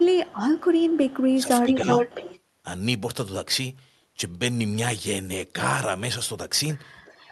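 From the start to 1.37 s a faint, delayed copy of the speech trails the talker by about 310 ms, sitting well below the direct sound at roughly 30 dB down. This is an echo leak: the far end is most likely playing the call through a loudspeaker, and its echo canceller let part of what its microphone picked up slip back into the call.

Between 1.35 and 1.9 s the talker's level sags in pieces, for around 0.4 s in all, dipping by around 10 dB at its deepest. This is speech suppressed in double talk. With both ends active at once, the echo canceller likely could not tell the local talker from the returning echo and turned everything down together.

From 1.67 to 2.39 s the echo leak returns much stronger, now 361 ms behind and roughly as loud as the speech itself, so the two overlap audibly. A faint trace at the same 361 ms delay reappears from 7.05 s to the end.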